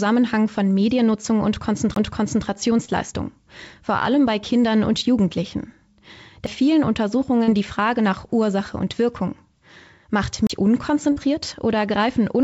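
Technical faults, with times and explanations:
1.94 s, 6.46 s and 10.47 to 10.50 s: CD skip. Each is a tick with a brief mute, then the sound resumes from another point. The mutes are roughly 20 ms, just a few milliseconds, and about 30 ms. The laser has jumped to another turn of the disc's spiral. The player silences the output while it re-locks, so the gap is followed by an abrupt change of position.
2.85 to 2.90 s, 7.44 to 7.50 s and 11.12 to 11.18 s: short concealed packet loss. Each is a short smear or wobble. The missing stretches are 20 ms, 40 ms and 40 ms. The receiver filled them with 29 ms, 39 ms and 42 ms of guessed audio, extending the last sound before blending back into the real signal. These repairs sit on a call path whose content stops at 8 kHz, which fits G.722 at 64 kbps.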